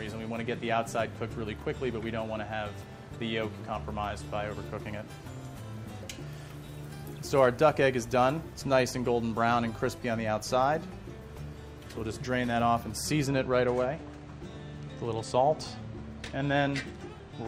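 From 13.27 s to the end at 17.48 s, the top end turns dull, with the brightest detail missing. This is channel delay (comb filtering). One channel arrives a tiny fraction of a millisecond late, which fits an offset of about two samples. When the channels are summed to mono, content shared by both cancels at evenly spaced frequencies. Here the first notch falls around 10 kHz, which takes the air out of the highs.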